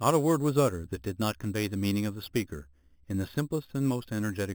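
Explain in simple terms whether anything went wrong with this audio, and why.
Imaging from sample-and-hold upsampling affects the whole speech clip. It sounds like a metallic fizz between 4 and 8 kHz. Unlike steady hiss, it rises and falls with the speech, and its pitch moves opposite the voice's.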